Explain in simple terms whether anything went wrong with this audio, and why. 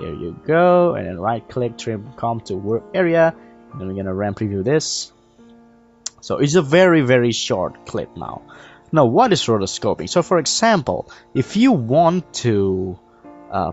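Nothing went wrong here: the sound simply carries the normal marks of a call, since the microphone processing trims away the very deepest bass and the Opus call connection leaves nothing above 8 kHz, which is expected for this kind of call and not a fault.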